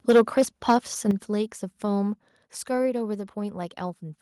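Microphone overload from 0.09 to 0.42 s puts a harsh, crackling edge on the loudest speech, most likely because input gain drove peaks about 6 dB past the converter's limit, flattening a sizeable share of samples. Microphone volume stepped down at 0.11 s, a sudden drop of 3 dB in voice and background, likely the call software cutting input gain after that distortion. Overload returns from 0.69 to 0.77 s, peaks likely running about 4 dB over and clipping a smaller portion, before a further, deeper step down at 1.11 s, about 8 dB, likely the software's response to that renewed clipping.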